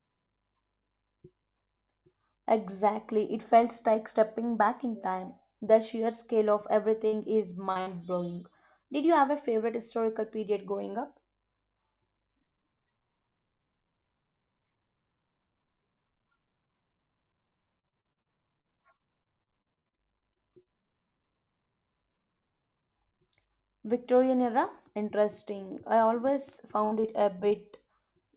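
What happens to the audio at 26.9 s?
A burst of packet loss runs from 26.85 to 26.94 s. A short run of packets in this speech never arrived in time, so the receiver stretched the last received sound across the gap for about 67 ms, letting it fade. When playback resumes, roughly 60 ms of speech has been skipped. A plain dropout would fall to silence. Here the gap holds a smeared, decaying copy of what came before, followed by a slight jump forward in the speech.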